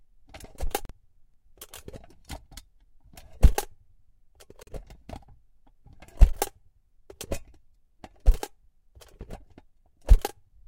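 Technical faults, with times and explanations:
0.85 to 0.91 s and 4.63 to 4.69 s, Bluetooth dropout: the sound cuts to silence for about 60 ms each time, with abrupt or briefly faded edges, then resumes further along as if it had kept playing. This points to packets likely arriving too late at the headphones and being discarded, consistent with roughly two lost frames per gap.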